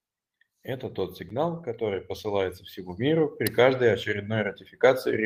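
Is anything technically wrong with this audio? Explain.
No, nothing technically wrong stood out on listening to this speech clip.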